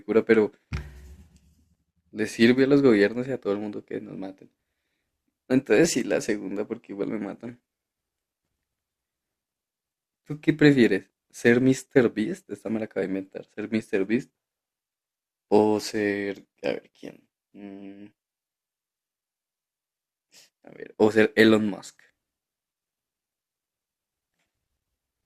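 No technical faults can be heard anywhere in the recording.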